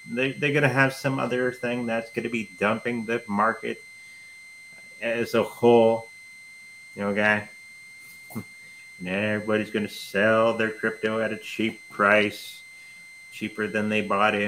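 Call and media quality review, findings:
Switching supply whistle, present for the whole clip. Power supply running in an audible burst mode, or beating against a second supply, couples a high tone into the path: a whistle near 2 kHz, wandering between 2.04 and 2.1 kHz as load shifts, roughly 20 dB under the sound.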